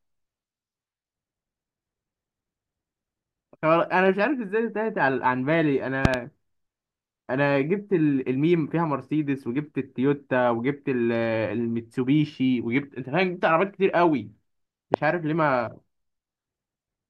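Loud pop at 6.05 to 6.16 s: two sharp pops in quick succession rise well above the speech, peaking at about 20 dB over the signal. The likely cause is a sudden voltage pulse, such as a plug, switch or static discharge, entering the chain. Another loud pop at 14.94 to 14.96 s is a single, harder thump, about 25 dB over the signal. In both, the speech continues underneath.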